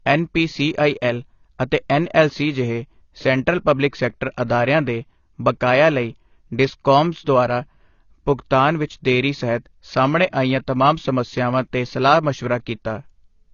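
Throughout the speech, nothing is heard above 7 kHz, and sibilants carry a smeared, warbling, fizzy texture. This is likely AAC compression at a low bitrate near 24 kbps. Unlike a plain low-pass filter, the damage shifts over time.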